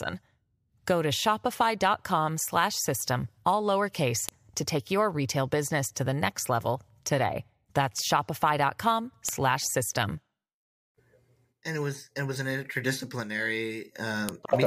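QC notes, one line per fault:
4.29, 9.29 and 14.29 s: file header played as audio. Joined pieces kept their headers, so a few dozen header bytes play as samples, giving a sharp snap every 5 s at each seam. Unlike signal-dependent clicks, they land on exact 5 s boundaries whatever the speech is doing.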